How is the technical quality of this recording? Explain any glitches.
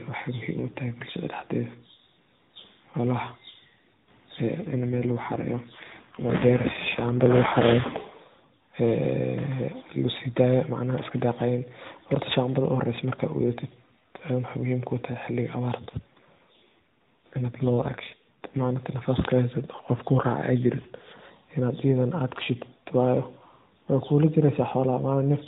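The recording is narrowband mobile speech carried over AMR-NB, so nothing above 4 kHz is present and there is light codec colouring throughout, with two stretches where the quality audibly degrades further.

AMR rate drop, from 4.60 to 8.44 s and again from 15.78 to 18.83 s: the bandwidth and continuity are unchanged, but the speech turns rougher, buzzier and more synthetic, consistent with the link forcing the encoder from 12.2 kbps down to around 5.9 kbps before recovering.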